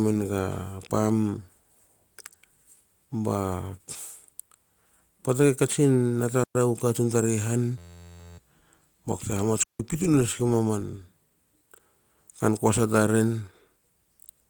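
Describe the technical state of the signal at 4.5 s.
At 4.5 s the signal is intact, with no fault present at that moment.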